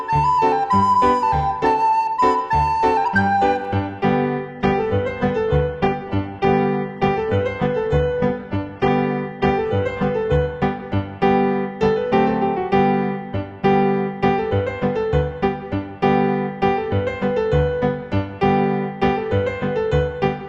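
From 4.41 s to 10.41 s the adaptive stream falls to a lower bitrate. For six seconds artefacts rise, consistent with a switch from roughly 96 kbit/s AAC to 12 kbit/s HE-AAC. Unlike a dropout, the quality changes abruptly with no gap.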